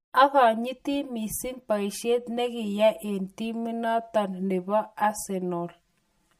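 From start to finish the speech carries channel delay (comb filtering): one channel runs roughly 5 ms behind the other, and when the two are summed to mono, everything they share cancels at regular intervals. The first notch falls near 100 Hz, with further notches spaced about 200 Hz apart above it, which leaves the voice hollow and phasey. A spectrogram shows this as fixed horizontal dark bands that stay put however the speech moves.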